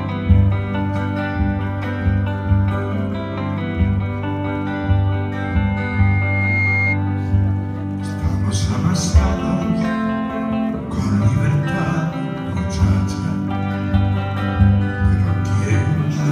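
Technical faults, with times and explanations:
5.44 to 7.01 s, loudspeaker feedback squeal: a 2.1 kHz tone swells over roughly a second until it is about as loud as the rest of the sound, because the microphone hears its own loudspeaker and the loop gain passes one there. A spectrogram shows a bright horizontal line thickening; the waveform envelope balloons.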